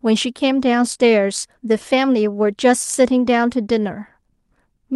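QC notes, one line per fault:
No faults are heard in the speech. The WebRTC call path leaves its usual light coding texture, and the top end stops at about 12 kHz, which fits an Opus call at a moderate bitrate.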